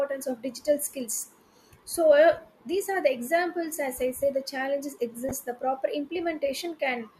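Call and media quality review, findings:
Corrupt frame decoded, 1.21–1.23 s and 5.29–5.31 s: decoder played bit-damaged compressed frames, a couple then a few in a row, with misread gains and codes. Energy lands at wrong frequencies, giving short chirps, squeaks, blips or noise bursts, first at about -35 dBFS, louder second at about -20 dBFS.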